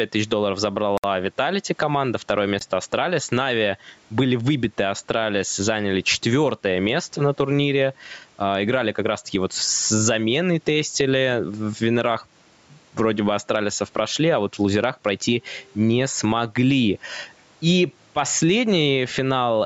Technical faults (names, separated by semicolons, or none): gain pumping; Bluetooth stall